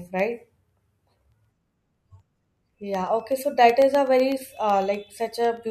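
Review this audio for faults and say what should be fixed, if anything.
Periodic USB or driver dropouts from 0.07 to 5.57 s: every 0.125 s, a fraction of a millisecond of the speech drops to silence, heard as regular ticks. The waveform shows tiny notches, and the spectrogram shows evenly spaced thin vertical broadband lines. To prevent this, stop the background task that periodically blocks the USB bus or audio driver, or move the interface to a dedicated USB controller with a larger buffer.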